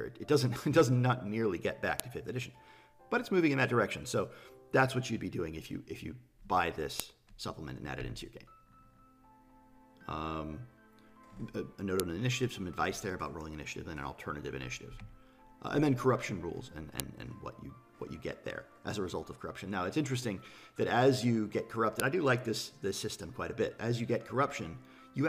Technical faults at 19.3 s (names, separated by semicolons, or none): none